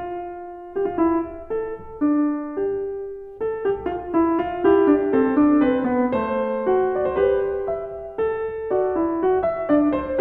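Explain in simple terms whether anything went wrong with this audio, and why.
Nothing went wrong with this music recording: the signal stays steady and intact all the way through, with no technical problems to point to.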